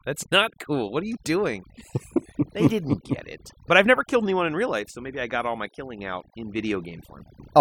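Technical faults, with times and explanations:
Throughout: overdone noise removal. The noise reducer was pushed too hard, so it pulls individual frequency bands right down whenever they sit near its noise estimate. The gaps drop and break up into little twinkling specks, and the quieter parts of the speech get eaten too.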